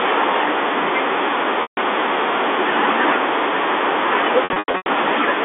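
From 1.62 to 1.77 s the sound holds on a buzzy, frozen tone that fades away, and from 4.44 to 4.86 s it stutters repeatedly. Both are packet loss with pitch repetition: about 150 ms and then 300 ms of audio went missing, and the receiver filled the gaps by repeating the last pitch period.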